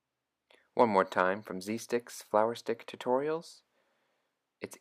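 There are no technical faults to describe in this audio.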